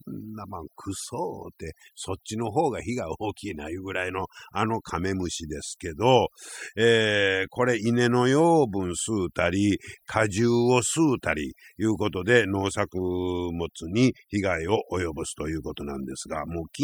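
From start to finish, the speech shows overdone noise removal. A noise reduction stage was pushed too hard on a noisy recording. It drives individual frequency bands down or off whenever they sit close to its noise estimate. Quiet parts of the voice fall below that line and vanish too. The gaps between phrases drop away, dotted with twinkling specks.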